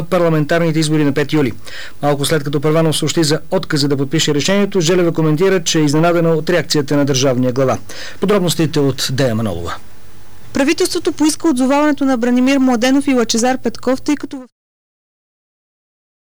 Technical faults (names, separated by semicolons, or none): none